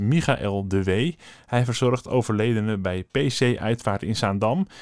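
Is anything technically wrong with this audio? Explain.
No, nothing technically wrong can be heard here.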